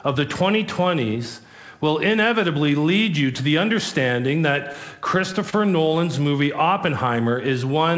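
From 4.57 to 5.54 s, repeated stalls (stutter): the jitter buffer ran dry six times, each gap up to 29 ms patched by extending the preceding sound, so playback drags and hiccups.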